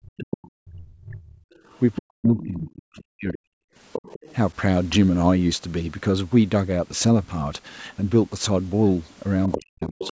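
A speech recording whose talker's voice sinks almost to silence, by roughly 40 dB at its deepest, from 0.0 to 3.44 s and again from 9.56 s to the end. This is speech suppressed in double talk, likely because both sides spoke at once and the echo canceller, unable to separate the talker from the loudspeaker echo, turned everything down. A second voice also surfaces underneath at 0.17–0.47 s, 1.53–2.67 s, 3.93–4.34 s and 9.45–10.13 s, faint at first and growing to roughly 10 dB below the talker by the later stretches. That is the other side's voice leaking through, likely loudspeaker sound the echo canceller failed to remove from the microphone.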